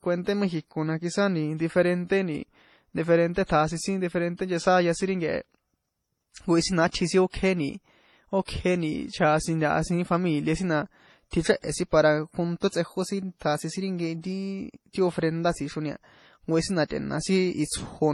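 Throughout the speech, nothing sounds above 12.1 kHz, and artefacts from two codecs are layered, likely from transcoding between lossy codecs: MP3 at 32 kbit/s, then HE-AAC at 48 kbit/s.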